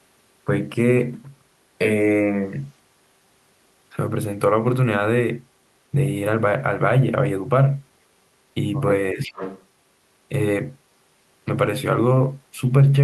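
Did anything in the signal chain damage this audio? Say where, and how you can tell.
Yes. From 9.12 to 9.34 s the speech dips by roughly 10 dB, visible as a waveform notch. This is speech suppressed in double talk, likely call-processing echo cancellation.

From 9.23 to 9.65 s a faint copy trails 366 ms behind, about 15 dB down, a repeated spectrogram pattern. This is echo leak, likely imperfect echo cancellation.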